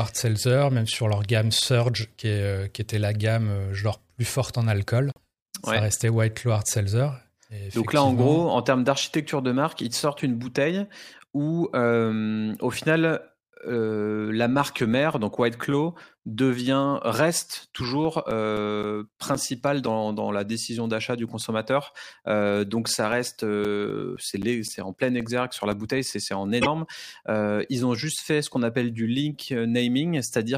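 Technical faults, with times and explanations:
5.11–5.17 s, broken MP3 bit reservoir: the sound skips ahead and leaves a glitch about 66 ms long, roughly two and a half 26.1 ms frames. It's likely that some frames were dropped, so the following frame pulled its borrowed bits from the wrong data and decoded garbage until the reservoir caught up.
26.61–26.66 s, broken MP3 bit reservoir: right after "c'est en", a similar 56 ms glitch, a jump forward with a brief disruption spanning about two frames.
18.05–20.13 s, CD scratch ticks: between "devient reste" and "la décision d'achat du", nine ticks at roughly four per second, the longest around 10 ms. That regular spacing is one disc rotation. Each pass over the scratch wipes out more than the error correction can rebuild, so the player patches or mutes a few samples.
23.12–25.98 s, CD scratch ticks: after "donc ça" and up to "c'est en", twelve more ticks at the same steady rate of about four a second, again no longer than about 10 ms. 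The damage recurs once per turn of the disc.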